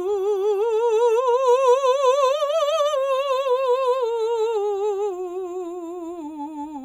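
No technical faults are audible anywhere in this music.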